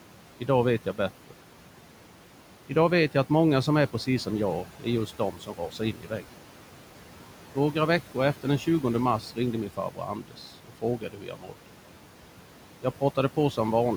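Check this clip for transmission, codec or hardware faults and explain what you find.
Two faults are present, both from noise suppression.

Noise suppressor artifacts run through the whole clip. The suppressor pulls down the bands it judges to be steady noise by about 12 dB, frame by frame. The room noise, which sits about 16 dB below the speech, drops away in the gaps and comes back underneath each phrase.

Speech cut by the noise suppressor occurs three times. At 4.65 to 4.86 s, right after "som är precis som", roughly 100 ms of speech drops by up to about 10 dB. From 5.07 to 6.36 s, about half a second is pulled down by up to about 12 dB. From 9.69 to 11.55 s, following "mars ringde min", around a second is lowered by up to about 12 dB. In each case the suppressor misclassified low-level speech energy as noise, so soft consonants and trailing syllables sound swallowed or faint.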